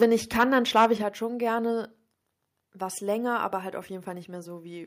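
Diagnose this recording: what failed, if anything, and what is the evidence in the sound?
Microphone overload at 0.02–0.06 s and 0.4–0.86 s: peaks up to about 6 dB past full scale are flattened, likely at the converter, adding harsh crackle.

Microphone volume stepped down at 0.03 s and 1.02 s: level drops abruptly by about 3 dB, then about 5 dB, likely call processing reducing input gain after clipping.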